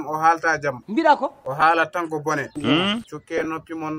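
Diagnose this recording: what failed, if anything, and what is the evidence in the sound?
Lost LE Audio frames at the wireless link: a brief noisy smear at 1.61 s, which fits one missing 10 ms frame, then scattered smears from 3.38 to 3.46 s, the longest run about 20 ms. Unlike hard dropouts or clicks, the LC3 decoder fills each gap with the previous spectrum, signs randomised, so the sound blurs rather than cutting out. The light codec compression shows at most as a faint watery texture on noise and attacks.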